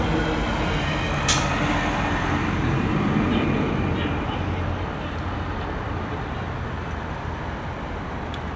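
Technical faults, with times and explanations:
No technical faults are present: the audio passes through the call's microphone processing and a G.722 link at 64 kbps as expected, with the band ending at 8 kHz as that path normally allows.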